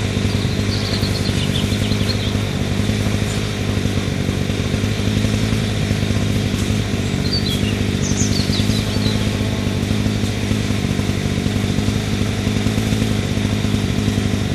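From 8.85 to 9.79 s a GSM phone buzz sits about 17 dB below the sound: a nearby 2G handset on a call pulses its transmitter 217 times a second, and the audio circuitry rectifies those bursts. The result is a steady, raspy, harmonic-rich buzz, unlike mains hum, whose 50 or 60 Hz base tone is smoother.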